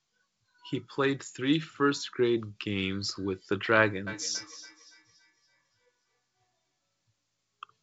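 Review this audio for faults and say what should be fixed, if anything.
From 4.07 to 6.2 s there's a feedback echo between two devices: the speech comes back about every third of a second, thin and ringy, peaking about 22 dB under the talker. A second device in the room is replaying the call into this mic, so this end's echo canceller can't remove it. It sits over the G.722 wideband band, which stops around 7.8 kHz. To prevent it, mute or unplug the second device's speaker, or get everyone in that room onto one device.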